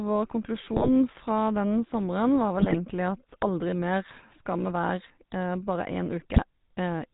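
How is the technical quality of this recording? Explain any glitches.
Pretty rough, honestly. The whole thing has that old phone-network sound, and three short stretches get properly mangled on top of it.

Throughout, you're hearing the GSM full-rate codec. It rebuilds speech from a vocal-tract model fed by sparse, regularly spaced pulses, and cuts everything above 4 kHz. That gives the plainly audible buzzy, gravelly roughness and dull top end, which fits the 13 kbps full-rate coder.

At 0.71 to 0.90 s, 2.59 to 2.77 s and 6.34 to 6.42 s there are GSM bit errors. Corrupted filter, pitch or gain values reach the decoder, so a few frames come out with a warped spectrum or a jumped level. You hear brief squawks, pops and gargling.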